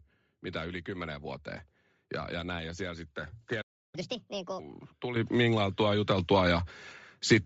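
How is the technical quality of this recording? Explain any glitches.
The recording has clear technical problems: coarse codec coloration throughout, a brief dropout followed by sped-up playback, and two sudden jumps in level near the end.

Bluetooth LC3 compression runs through the whole clip. The upper part of the speech band sounds breathy and grainy, with sibilants smeared into noisy hiss rather than crisp detail. The likely cause is a low-bitrate transform codec that discards much of the high-frequency content and fills the gaps with synthetic noise. The damage is plainly audible and fits LC3 at around 32 kbps with 7.5 ms frames.

A playback stall begins at 3.61 s, right after "näin ja siellä sitten". The speech cuts off mid-flow and the output goes silent for about 0.32 s, until 3.95 s. A gap like this, rather than a click or a crackle, points to the player running dry of buffered data or being held up before it could resume.

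Catch-up at higher speed follows directly, from 3.95 s to 4.59 s. To recover the time lost in the stall, the player resamples its backlog at 1.5 times normal speed. Because speed and pitch rise together, the speech sounds hurried and chipmunk-like, roughly seven semitones higher, before snapping back to normal rate and pitch at 4.59 s.

Microphone volume stepped up occurs twice. At 5.16 s the level jumps by about 10 dB, and at 6.18 s it rises again by about 3 dB. Each time the speech and the background noise get louder together in a single step, which is what happens when call software judges the input too quiet and raises the device's capture gain directly rather than fading it in.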